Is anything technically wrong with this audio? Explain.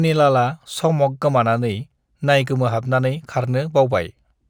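Yes, there is imaging from linear upsampling throughout the speech. The sample rate was raised by joining samples with straight lines, which fits a conversion from 24 kHz to 44.1 kHz. That crude interpolation filters poorly, so the top of the original band is dulled and mirror copies of the spectrum remain between 12 kHz and 24 kHz, roughly 40 dB below the signal. They add a faint metallic shimmer to sibilants.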